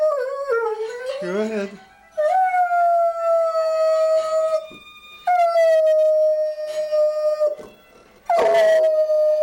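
No technical faults can be heard anywhere in this recording.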